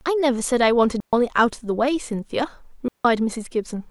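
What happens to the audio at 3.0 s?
At 3.0 s the speech falls into a digital wireless dropout, running from 2.88 to 3.05 s. The receiver lost too much of the link's data and muted for about 167 ms. The result is a clean hole of near silence. No noise burst comes before or after it.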